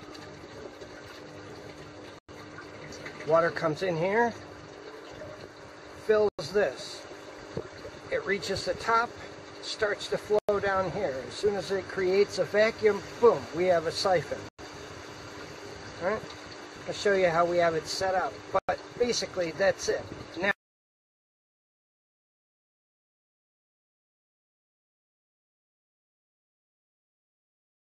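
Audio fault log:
2.19, 6.29, 10.39, 14.49 and 18.59 s: gap between chunks. The sound drops out for 100 ms at each join, then resumes intact, so nothing is lost. It arrives in 4 s chunks, with silence inserted between them.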